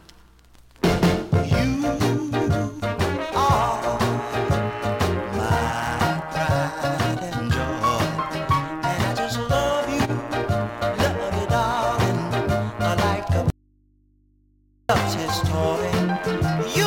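An audio dropout to a faint residue runs from 13.50 to 14.89 s: the sound cuts abruptly to mains hum roughly 40 dB down, likely a live but disconnected input, not a pause or fade.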